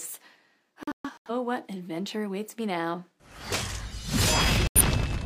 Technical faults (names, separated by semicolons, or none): digital broadcast dropout